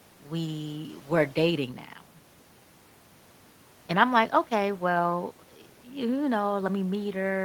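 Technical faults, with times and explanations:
No technical faults are audible in this speech recording.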